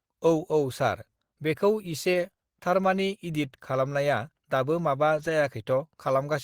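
Right after "बेखौ इसे", at 2.13 to 2.15 s, there's a lost packet rebuilt from error correction. The decoder filled it from the next packet's low-bitrate backup copy, so there's no gap, just a brief rough, noisy patch. It happens again after "खालामनाया दाबो माबा", 5.17 to 5.31 s. That one is longer, with four separate lost packets rebuilt.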